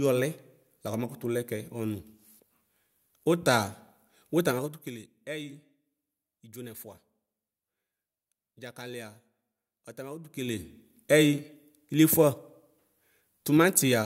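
From 4.4 to 5.04 s the speech drops by roughly 15 dB with zipper noise, and from 10.22 to 10.7 s it rises by a similar amount with the same fault. The gain moves in unsmoothed steps of about 2 dB, some fifteen to twenty per second, so each jump clicks audibly. A waveform shows a staircase envelope, and a spectrogram shows thin vertical broadband lines at each step.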